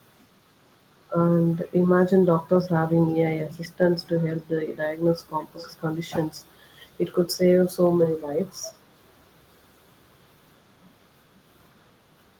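At 3.6 s there's a quick echo leak, under a tenth of a second, and then a longer one from 5.28 to 5.74 s. Both are faint delayed copies of the speech trailing about 0.4 s behind, well below the main level, with the second stretch a touch louder. The likely cause is a loudspeaker at the far end whose echo canceller let some of its microphone pickup slip back into the call.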